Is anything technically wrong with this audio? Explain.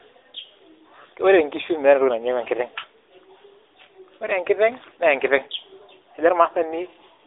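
Yes. Throughout, the speech shows AMR narrowband mobile codec damage: it is confined to 300 Hz to 3.7 kHz, and its pulse-driven vocal-tract modelling sounds plainly buzzy and synthetic, consistent with a mid-rate mode near 10 kbps.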